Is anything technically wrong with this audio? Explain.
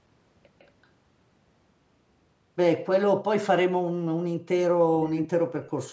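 Yes. From 0.59 to 0.68 s there is an echo leak. A loudspeaker at the far end likely fed the speech back into its microphone, and the echo canceller missed some of it. The result is a brief, very faint copy of the speech trailing 157 ms behind.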